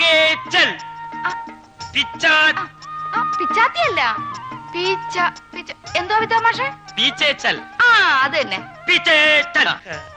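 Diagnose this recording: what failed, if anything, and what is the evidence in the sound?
Nothing in the recording points to a failure at any stage of the chain. No event in the sound marks a point where capture, conversion, transmission or playback went wrong.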